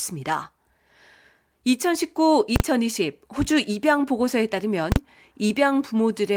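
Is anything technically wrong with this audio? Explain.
Yes. At 2.56 to 2.60 s and again at 4.92 to 4.96 s, loud bangs cut through the speech. These are invalid numbers at full scale: a calculation produced infinite or invalid values, pinning each 40 ms block to maximum level.

At 5.47 to 5.51 s, a brief smear blurs the speech. This is short concealed packet loss: 20 ms never arrived and was filled by extending the preceding sound.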